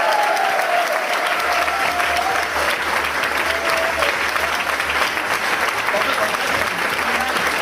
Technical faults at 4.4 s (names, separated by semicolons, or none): none